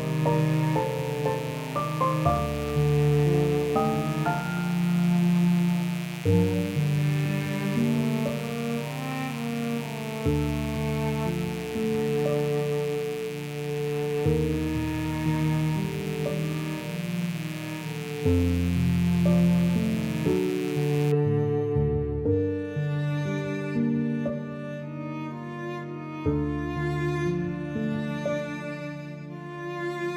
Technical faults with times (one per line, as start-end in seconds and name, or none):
0.00-21.12 mains buzz